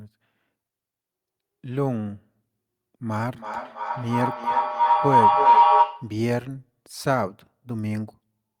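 At 3.33 s a feedback howl starts in the speech. A microphone is picking up a nearby loudspeaker on the same call, and each pass round the loop comes back louder. It narrows to a tone near 1 kHz, pulsing about every third of a second. It peaks about 9 dB above the speech and stops at 6.26 s.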